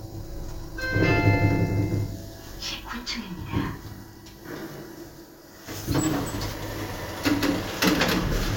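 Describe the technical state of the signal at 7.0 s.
At 7.0 s the audio is intact, with no dropout, clipping, distortion or other fault audible at that moment.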